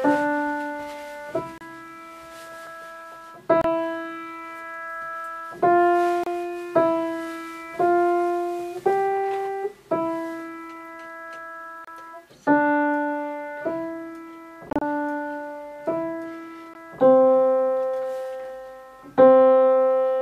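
Short holes of silence cut into the sound at 1.58, 3.61, 6.24 and 11.85 s, each about 29 ms long. A choppier stretch from 14.70 to 14.82 s loses about 73 ms in several gaps, none longer than 29 ms, and a brief gap follows at 16.74 s. Each time, the sound picks up further along, as though it had kept playing. This is likely a Bluetooth dropout: packets arrived too late for the headphones and were discarded.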